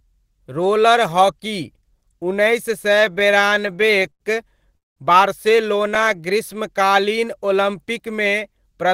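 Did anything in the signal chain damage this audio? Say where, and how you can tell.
Yes. Network and jitter buffer: repeated stalls (stutter) from 2.95 to 4.22 s, right after "उन्नैस सए". Around twenty short holds, up to 99 ms, stretch the speech as late packets keep draining the buffer.

At 4.77 to 4.98 s there's a call audio freeze: about 190 ms, nearly all silence, then the speech picks up where it stopped. Likely packets held up in transit emptied the buffer.

Jitter buffer slow-down from 5.98 to 7.14 s: speech runs at 93% speed with unchanged pitch, about 84 ms added, as the receiver repeats pitch periods to rebuild its reserve.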